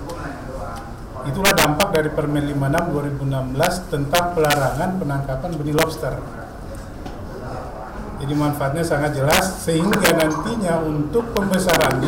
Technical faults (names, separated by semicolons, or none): integer overflow